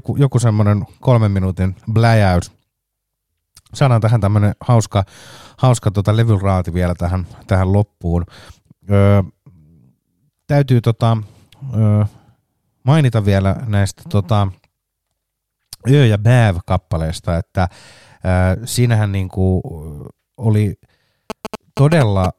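From 21.30 s to 22.26 s, GSM signalling bursts break into the speech. A nearby 2G phone is sending short groups of radio bursts, as it does while setting up a call or a text, and the audio circuit rectifies that RF energy into the signal. The result is a galloping dit-dit-dit of short buzzes repeating at about 217 Hz, sitting a little below the speech level and continuing almost to the end of the clip.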